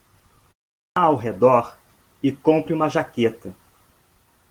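At 0.77 s the output device, having gone idle during the 0.32 s pause before it, had to wake and resynchronise as speech resumed. That clipped start after a pause swallows about 194 ms of sound, through to 0.96 s, so the next word breaks abruptly out of silence with its opening sounds missing. The surrounding audio carries the mild, full-bandwidth coding of Opus voice compression, consistent with a hybrid mode at a moderate bitrate.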